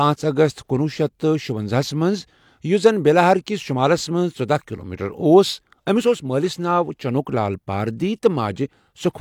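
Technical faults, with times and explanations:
Nothing to flag here, as there's no technical problem anywhere in this bit of speech.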